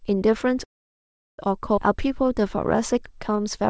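At 0.64 s the speech stops and a gap of about 0.74 s opens. A brief trace of the last sound dies away and nearly all of it, 0.73 s, is silence. The speech then resumes exactly where it broke off, with nothing missing. This is a call audio freeze, likely caused by delayed packets draining the jitter buffer.

At 1.76 s there is a skip ahead. Roughly 0.4 s of speech is dropped, and the two sides are joined across only a 10 ms seam, so the speech jumps forward abruptly. This is typical of late or overflowing buffered audio being discarded.

From 1.98 s to 3.63 s a jitter buffer slow-down stretches the speech to about 93% speed at unchanged pitch. Repeated pitch periods and pause fragments add 116 ms to rebuild the buffer's reserve. Sounds are drawn out, and the G.722 call path leaves nothing above 8 kHz.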